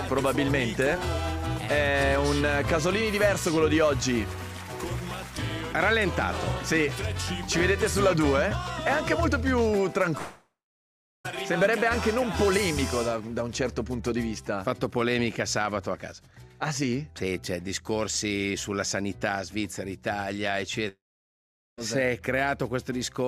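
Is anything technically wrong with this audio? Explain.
Yes. At 10.17–11.26 s and 20.88–21.79 s the sound collapses into a fading buzz, then about 0.7 s and 0.8 s of near silence, before resuming further on with roughly 1.1 s and 0.9 s missing. This is likely a long network dropout, where the receiver stretches the last audio until it runs dry. The waveform shows a decaying smear into a flat gap, and the spectrogram shows smeared bands fading to an empty column.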